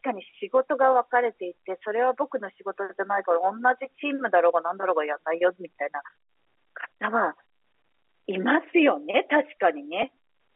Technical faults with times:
10.02 packet loss with pitch repetition

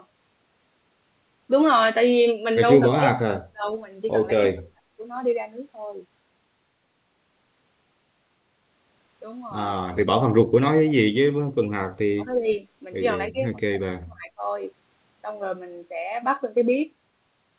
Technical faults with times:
2.98-3.66 speech suppressed in double talk
4.41-5.01 speech suppressed in double talk
10.82-11.20 speech suppressed in double talk
12.06-12.48 speech suppressed in double talk
13.31-14.41 speech suppressed in double talk

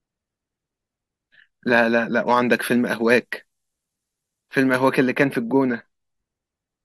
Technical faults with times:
2.27-4.97 pre-emphasis left on

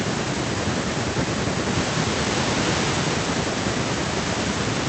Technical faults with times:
none

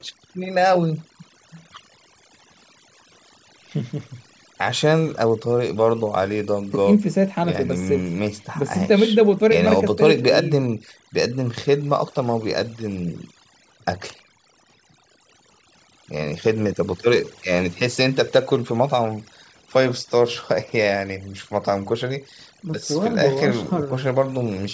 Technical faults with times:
0.00-24.74 overdone noise removal

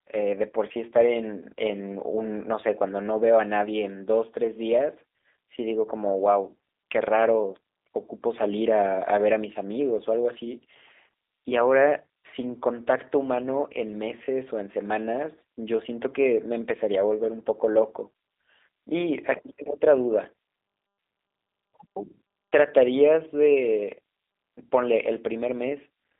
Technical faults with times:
0.00-26.19 G.729 codec

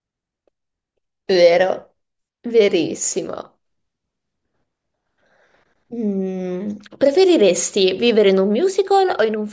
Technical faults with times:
none

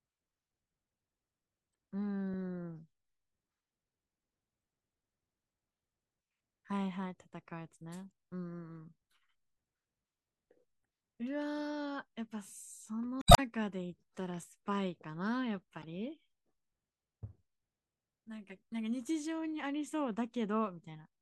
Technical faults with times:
1.72-1.74 damaged data in a compressed stream
8.11 damaged data in a compressed stream
10.81-10.84 damaged data in a compressed stream
13.19-13.39 damaged data in a compressed stream
15.82 damaged data in a compressed stream

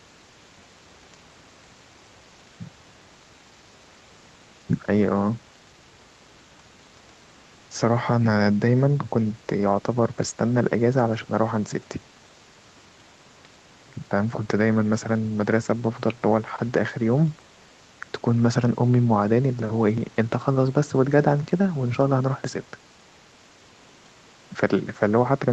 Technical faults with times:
none

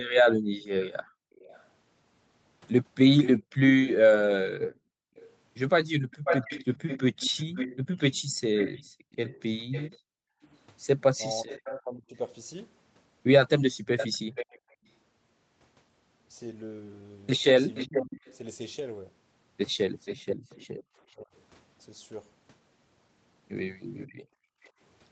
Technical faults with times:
0.41-1.10 speech suppressed in double talk
0.81-14.59 echo leak
4.78-14.73 speech suppressed in double talk
5.10-5.16 background gated by the echo canceller
8.83-8.88 background gated by the echo canceller
17.75-24.67 echo leak
17.88-24.72 speech suppressed in double talk

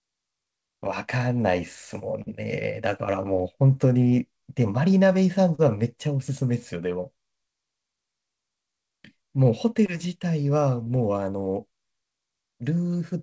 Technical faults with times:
2.22-2.28 short concealed packet loss
5.55-5.60 short concealed packet loss
9.86-9.90 short concealed packet loss
10.84-10.88 short concealed packet loss

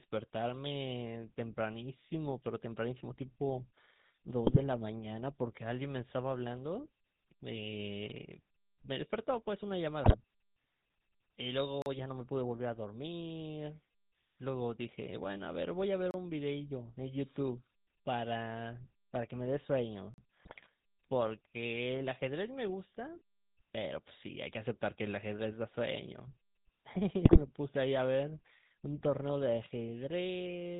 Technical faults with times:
0.00-30.79 GSM full-rate codec
4.44-4.61 GSM bit errors
10.04-10.16 GSM bit errors
11.82-11.86 block of digital silence
16.11-16.14 block of digital silence
20.14-20.18 block of digital silence
20.40-20.67 GSM bit errors
27.25-27.42 GSM bit errors

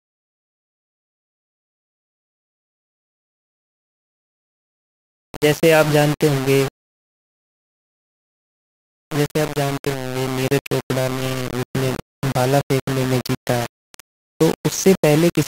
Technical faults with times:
0.00-15.48 low bit depth without dither

